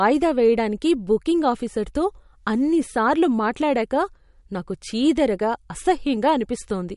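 MP3 compression, likely the cause, runs throughout: the treble stops dead at 11.2 kHz, and weak frequency components drop in and out between frames, giving plainly audible watery swirl and metallic chirps on s sounds, which fits a bitrate near 49 kbps.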